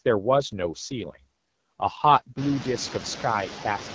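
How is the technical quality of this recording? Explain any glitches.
The technical quality is held back by two faults: noise suppression artifacts across the whole clip, and a codec rate drop that covers most of it.

Noise suppressor artifacts are present from start to finish. A suppressor lowers each frequency band it judges to be steady noise, frame by frame. Here it cuts the noise by about 17 dB. The background drops away between words and comes back underneath them. After about 2.5 s the room noise rises sharply.

An AMR rate drop runs from 0.36 s to 3.86 s. The call uses AMR wideband, or HD Voice, which starts at 12.65 kbit/s and sounds clear there. The network then pushes the codec down to 8.85 kbit/s, most likely because of a weak radio link. The freed bits go to error protection. The bandwidth stays the same and nothing drops out. The voice turns rougher, grainier and more synthetic for the whole stretch.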